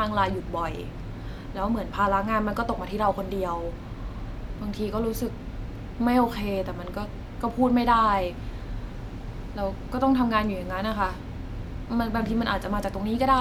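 No technical faults are audible.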